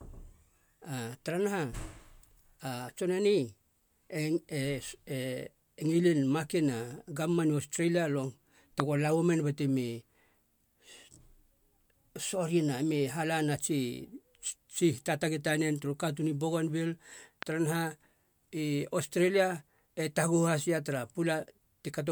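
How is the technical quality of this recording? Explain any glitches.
Two loud pops break into the speech, one at 8.80 s just after "nu australia long" and one at 17.43 s just before "taranaha i australia". Each is a single pop standing about 20 dB and about 15 dB above the speech respectively. The cause is likely a sudden voltage step from a plug, switch, static or driver glitch, shaped by the circuitry that follows. It is heard as a sharp pop over continuing speech, a tall narrow spike on the waveform and a thin full-height vertical line on a spectrogram.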